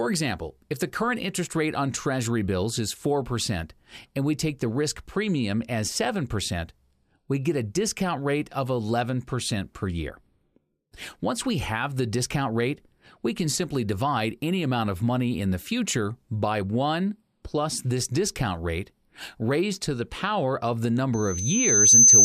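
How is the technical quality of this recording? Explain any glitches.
The recording has one clear glitch, at the very end. From 21.14 s to 22.25 s, a loudspeaker feedback squeal appears. The microphone re-amplifies its own loudspeaker until a 6.2 kHz tone swells over about 0.7 s, ending far louder than the sound. A spectrogram would show a bright horizontal line at 6.2 kHz, and the waveform would show a rising envelope.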